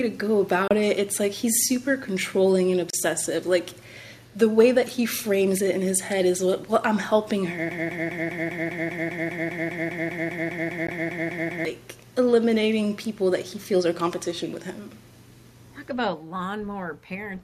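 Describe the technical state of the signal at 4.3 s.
At 4.3 s there is an echo leak, running from 4.22 to 4.37 s: a very faint copy of the speech returns 230 ms after the original, too quiet and too late to blend with it. The likely cause is a far-end loudspeaker whose echo canceller let part of the microphone pickup through. Unlike room reverberation, which trails off smoothly and immediately, this is a distinct, detached repeat after a clear gap.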